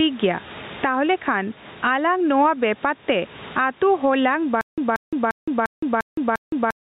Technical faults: gain pumping; stutter with silent gaps

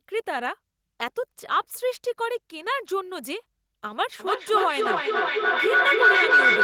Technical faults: feedback howl

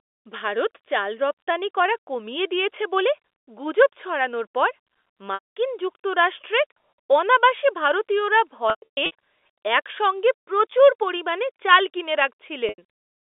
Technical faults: packet loss with pitch repetition

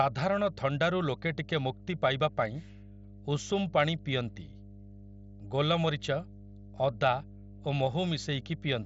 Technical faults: mains hum

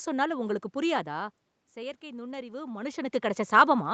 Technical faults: automatic gain rising

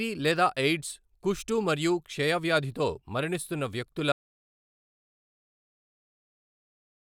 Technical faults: audio dropout to silence

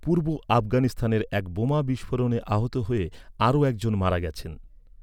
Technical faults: none

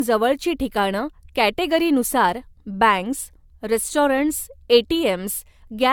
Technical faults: generation loss

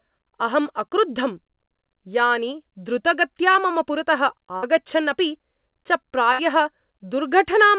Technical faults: short concealed packet loss; burst of packet loss

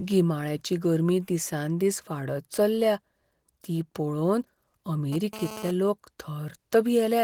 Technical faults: GSM phone buzz

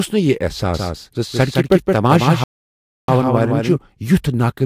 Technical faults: doubled audio track; playback stall

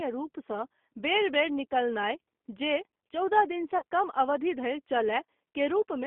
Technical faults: G.729 codec; VoIP packet loss concealed by the speech codec

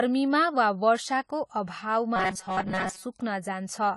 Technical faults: low-bitrate audio saved at a high bitrate; robotic sound from repeated short buffers

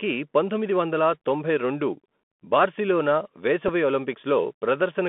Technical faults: Bluetooth CVSD headset codec; Bluetooth headset packet repeated

